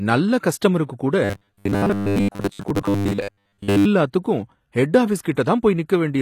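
Across the whole recording the treble has a gritty, metallic sheen. The s sounds are smeared and lispy, and the top end sounds synthetic rather than natural. This points to HE-AAC compression, likely at around 24 kbps, where the upper spectrum is rebuilt by copying lower bands upward instead of being coded directly. The harmonics therefore fail to line up above the crossover. On a spectrogram the treble looks blocky and repetitive.

From 1.24 to 3.86 s, just after "நல்ல கஸ்டமருக்கு கூட", the sound collapses into a rigid metallic buzz at 100 Hz. It still loosely tracks the speech underneath. This is robotic sound from repeated short buffers, likely caused by audio arriving too slowly so that the last 10 ms chunk is played again and again while most of the real signal is skipped. The waveform shows a near-identical 10 ms pattern tiling the span. The spectrogram shows rigid horizontal harmonics every 100 Hz.

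Near the end, two attacks are blurred by pre-echo: a short hiss from 5.22 to 5.25 s, spreading about 28 ms ahead of the onset, and another from 5.34 to 5.37 s, about 24 ms. The codec's quantisation noise, sized for the loud transient, fills the quiet moment before it within the same transform block, so each onset sounds soft instead of crisp. On a waveform, low-level fuzz precedes each attack. On a spectrogram, a broadband smear leads each onset.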